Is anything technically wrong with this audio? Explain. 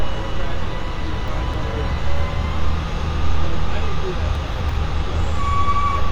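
Yes. Between 1.28 and 1.62 s, and again between 4.35 and 4.69 s, there are chunks out of order. In each span, one block of about 85 ms arrives three blocks late. It plays after the three blocks that should have followed it, which fits a buffered or packetised writer delivering out of sequence. Nothing is missing, but the order is scrambled, so the sound jumbles briefly, with three hard joins. A waveform shows abrupt discontinuities at those joins. A spectrogram shows thin vertical broadband lines there, with the evolving content visibly shuffled.

Between 5.95 and 6.00 s, near the very end, there is damaged data in a compressed stream. Corrupt bytes make the decoder misread frames, lose sync and hunt for the next valid header. The result is a short chirp, squawk, click or hole of about 50 ms.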